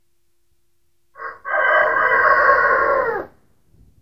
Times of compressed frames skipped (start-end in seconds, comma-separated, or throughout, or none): none